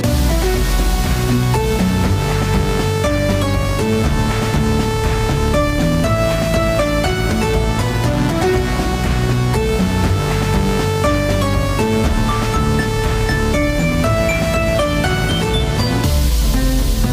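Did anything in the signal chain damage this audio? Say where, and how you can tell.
Yes. A train of clicks runs from 8.69 s to 16.27 s: about a hundred near-identical pulses at a steady 12.8 per second, roughly as loud as the sound itself and clearly audible as ticking that continues through quieter stretches. Their uniform shape and regular spacing point to a periodic external source rather than the material. The stage is likely analogue wiring picking up interference from nearby equipment, or an interface injecting a pulse on a fixed cycle.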